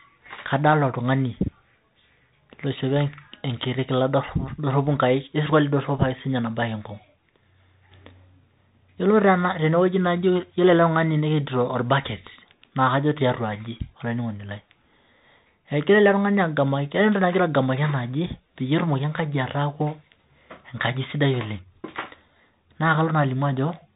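Throughout, the speech carries the sound of a Bluetooth CVSD headset codec, which fits a 64 kbps CVSD link: one-bit delta coding with an adapting step. Nothing survives above 4 kHz, s sounds turn scratchy, and a granular hiss sits underneath. A spectrogram shows a hard ceiling at 4 kHz, and the waveform looks grainy.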